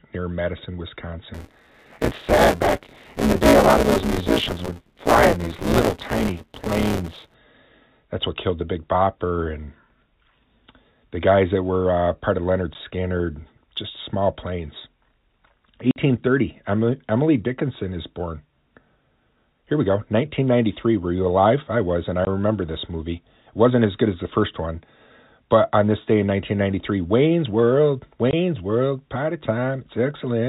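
From 1.34 to 7.34 s the speech carries buffer tearing, a steady robotic buzz at 172 Hz, which fits a 256-sample buffer. The writing program and the playback hardware have drifted so they cross inside every period. Most of each buffer, roughly two thirds or more, replays audio from about 20 ms earlier, with hard joins on both sides. Unlike a fixed hum, the buzz rides only on the voice and stops in the pauses. Its pitch stays locked to the buffer rate rather than following the speaker.

Packet loss filled with silence then cuts four clean holes. The first is a 10 ms hole at 12.74 s. The longest runs 50 ms, from 15.91 to 15.96 s. A 20 ms gap at 22.25 to 22.27 s falls between "I was and I" and "this movie", and another 20 ms gap runs from 28.31 to 28.33 s. Every length is a multiple of 10 ms, which points to 10 ms packets. Each hole is true silence with hard edges. Concealment would instead smear or repeat sound across the gap, and here the receiver inserted nothing. 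The telephone-band G.711 coding keeps everything under 4 kHz.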